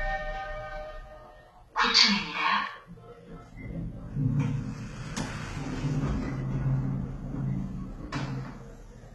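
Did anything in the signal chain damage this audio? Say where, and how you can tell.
Yes. Throughout the clip, the codec stage left heavy damage that is likely HE-AAC compression at a very low rate, consistent with about 16 kbps. The treble sounds gritty and metallic, and a spectrogram shows copied, smeared upper bands with nothing above 11.7 kHz.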